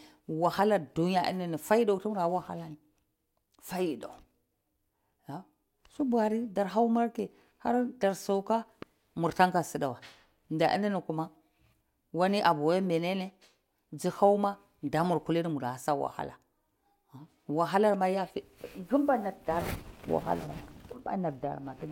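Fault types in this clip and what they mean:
No faults found on listening; the speech signal shows nothing to report.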